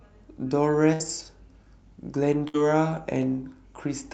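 Bursts of packet loss at 0.93 to 1.02 s and 2.48 to 2.56 s: about 60 ms of concealment extends and fades the preceding sound, then the speech resumes with roughly 60 ms skipped.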